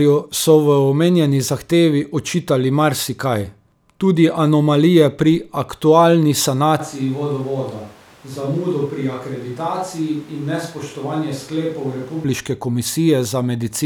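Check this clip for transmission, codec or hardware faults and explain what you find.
One hardware-related fault stands out. From 6.80 to 12.24 s the speech abruptly turns hollow and roomy, drops about 5 dB, and carries room noise roughly 25 dB below it. This is likely a switch to a distant microphone.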